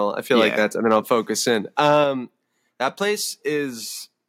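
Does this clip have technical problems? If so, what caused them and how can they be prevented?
Yes. Microphone overload occurs at 0.39 to 0.63 s, 0.91 to 0.96 s and 1.78 to 1.98 s. Peaks exceed the converter limit by about 2 to 3 dB, and their flattened tops give the loudest syllables a harsh, crackly edge. The likely cause is input gain set too high. Lowering the microphone input level, or increasing the distance to the microphone, keeps peaks below full scale.

Microphone volume stepped down at 1.02 s and 2.04 s. Each time the speech and background drop abruptly, by about 3 dB and then about 4 dB, shortly after the preceding overloaded passage. This is likely the call software's automatic gain control cutting the device input after detecting clipping. A correctly set input level from the start avoids these corrective steps.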